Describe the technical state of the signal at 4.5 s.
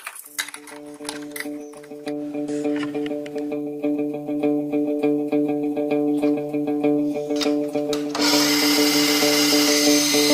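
At 4.5 s the signal is intact, with no dropout, distortion or other technical fault to be heard.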